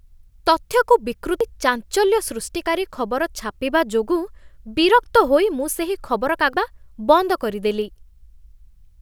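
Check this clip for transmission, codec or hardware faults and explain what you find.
Two CD skips occur, at 1.40 s and 6.54 s. Each time the laser jumped to another turn of the spiral: the speech mutes for a few milliseconds, then resumes from a different point, just before "ଚାଞ୍ଚଲ୍ୟ ସୃଷ୍ଟିକାରୀ ଖବର ଛାପିବା" in the first case.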